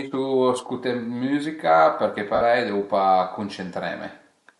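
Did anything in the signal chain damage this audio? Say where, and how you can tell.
Yes. Throughout the speech the upper spectrum sounds thinned and partly replaced by hiss, so sibilants and vowel tops carry a breathy, grainy edge. This points to the codec stage, likely Bluetooth LC3 compression at a moderate rate in the region of 48 kbps. The damage comes from the encoder dropping upper-band detail and filling it with shaped noise. It differs from a plain low-pass or band limit, which would sound dull but clean.

At 2.35 to 2.41 s there is a 60 ms stretch where the speech turns into a noisy, smeared copy of the preceding sound and thins out before normal audio returns. This is lost LE Audio frames on the wireless link. The length fits about six 10 ms frames that the decoder concealed by repeating the last spectrum with scrambled phase and fading it. A network dropout in a call codec would more often leave a gap or a repeated buffer than this hissy smear.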